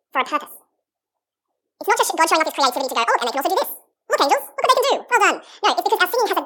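Speech throughout has a wrong sample rate: doubled speed, an octave higher, consistent with 24 kHz audio played at 48 kHz. Spectrogram harmonics sit doubled, and waveform syllables are squeezed.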